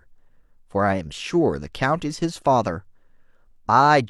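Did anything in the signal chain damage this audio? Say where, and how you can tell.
No damage in this chain.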